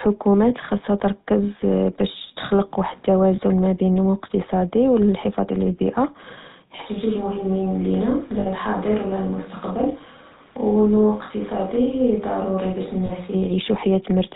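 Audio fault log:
Throughout: GSM full-rate codec. The whole clip has the gravelly, buzzy grain of the original 13 kbps GSM coder, and the damage is plainly audible. It doesn't carry the waveform itself. It models the vocal tract as a filter and drives it with a sparse train of evenly spaced pulses, keeping only every third excitation sample. That coarse pulse feed is what gives the rasp. Nothing gets through above 4 kHz, so the top end is missing and the speech sounds dull and boxed-in.
0.32 s, 3.36 s, 8.40 s, 13.06 s: lost GSM frames. There are four short dropouts, lasting 20 ms, 20 ms, 60 ms and 40 ms. In each one the decoder had no good frame, so it reused the settings of the last good one. You hear a brief metallic, ringing smear in place of the missing sound. The 60 ms gap at 8.40 s rings longest, but none of them lasts long enough to fade all the way to silence.
6.82–13.35 s: switch to a distant microphone. 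At 6.82 s the sound suddenly turns roomy and hollow. The low end thins out, the level drops by about 5 dB, and a room-noise floor appears well below the speech, around 30 dB down. That combination likely means the close mic's signal was lost and a far-off pickup, something like a camera mic, was used instead. At 13.35 s it snaps back to the close, drier sound just as abruptly.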